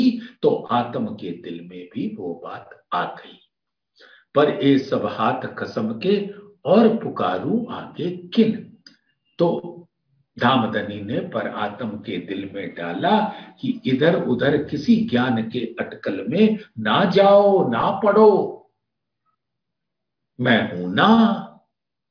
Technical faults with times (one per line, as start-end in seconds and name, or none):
none